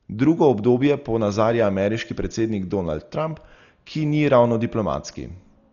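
Throughout, the speech is dull and rough, with nothing above 6.9 kHz and a fluttering noise, likely heavy Dolby Digital compression at about 40 kbps.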